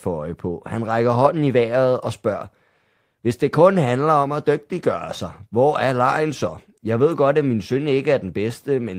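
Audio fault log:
Nothing to log here; I couldn't hear a single technical fault anywhere in this speech clip.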